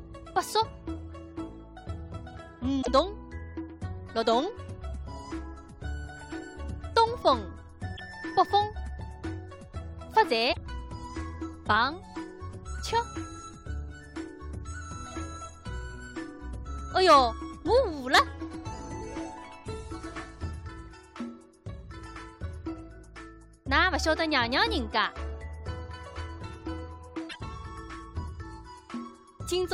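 Damaged data in the compressed stream causes four brief breaks: at 2.78 to 2.88 s, 7.93 to 8.00 s, 10.49 to 10.57 s and 27.26 to 27.36 s. In each stretch the coded frames arrive corrupted, so the decoder misreads them, loses its place in the stream and has to hunt for the next valid frame header before normal output resumes. Each fault lasts roughly 70 to 100 ms and sounds like a short, harsh blip or squawk.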